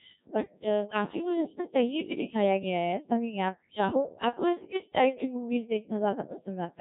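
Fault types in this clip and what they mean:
Codec 2 vocoder: the speech is rebuilt from pitch, voicing, energy and a coarse spectral envelope, so it sounds robotic and buzzy throughout, which fits a rate near 1.3 kbit/s. A spectrogram shows smeared, regular harmonic stripes; the waveform no longer matches the original.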